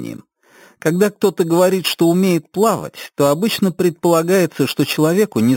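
Throughout, there is imaging from sample-and-hold upsampling. The audio sounds like an 8 kHz original repeated sample by sample up to 48 kHz without smoothing. A mirrored copy about 17 dB down fills 4 to 8 kHz as a metallic fizz following loudness. Spectrograms show the low band reflected upward, and waveforms show staircase steps.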